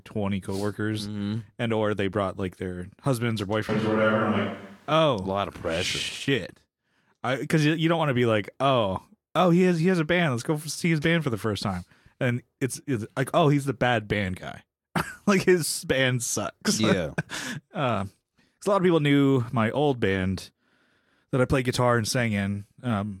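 Just after "like their husbands or", from 3.69 to 4.91 s, the speech abruptly turns roomy and hollow, with thinner bass and a faint bed of background noise roughly 35 dB below the speech, then snaps back just as suddenly. The loudness stays about the same. This points to a switch to a distant microphone, likely because the close mic's signal dropped out. Added reverb or a bass cut would not change the noise floor.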